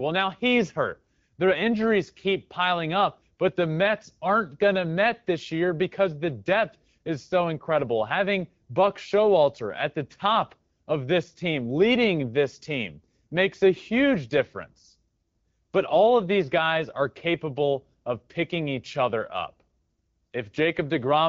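Speech carried over an AMR wideband (HD Voice) link at 12.65 kbit/s, and nothing is technically wrong with it.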